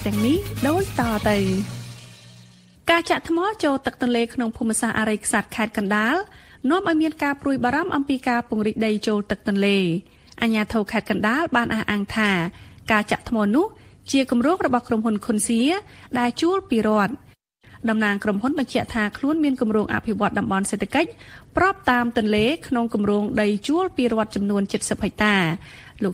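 Nothing stood out as a technical problem on listening to this audio.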